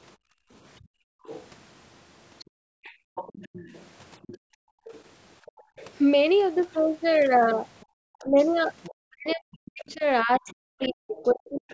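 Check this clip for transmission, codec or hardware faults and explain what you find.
The speech carries three echo-canceller faults. The call path's audio stops at 8 kHz, which fits wideband 16 kHz sampling.

Background gated by the echo canceller: from 0.17 to 1.25 s, 2.44 to 3.15 s and 4.38 to 5.78 s, the room sound falls by about 40 dB, and at 7.85 to 7.95 s by about 33 dB. The canceller clamps the microphone while its loudspeaker plays. Only the background vanishes, not the talker.

Other side's voice leaking through: from 1.25 to 1.44 s, 2.39 to 5.86 s and 7.8 to 11.73 s, a second, fainter voice sits roughly 20 to 25 dB under the talker. The likely cause is loudspeaker echo that the canceller failed to subtract. This adds a voice rather than removing sound.

Speech suppressed in double talk: from 8.23 to 11.7 s, while the other side is heard, the talker's own voice drops in pieces, by as much as 40 dB, for around two seconds in total. 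The canceller likely could not separate near speech from echo and turned both down. Unlike gating, the talker's voice itself disappears.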